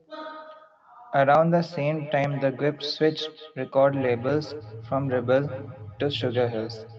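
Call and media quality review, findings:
Feedback echo between two devices, from 1.62 s to clip end. Speech returns at a steady interval of about a fifth of a second, repeats thinner and ringing, peaking about 15 dB below the talker. A second device in the room is replaying this microphone, which re-captures it, and the echo canceller misses it. Waveform: evenly spaced decaying copies. Spectrogram: stacked, time-shifted ghost harmonics. Content tops out at 8 kHz, consistent with the call's Opus wideband path.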